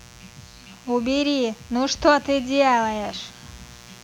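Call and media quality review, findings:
Mains buzz, entire clip. Probable cause: poor shielding or a nearby dimmer or rectifier injecting switching spikes at 60 Hz mains, twice per cycle. Result: raspy, steady buzz with harmonics into kilohertz, roughly 25 dB under the speech.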